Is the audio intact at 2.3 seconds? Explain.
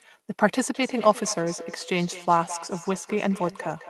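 No. A feedback echo between two devices is running from 0.71 s to the end. A second device in the room replays the call, and the first microphone picks that back up beyond its echo canceller's reach, so the sound returns roughly every fifth of a second, thinner and ringing, peaking about 15 dB below the speech.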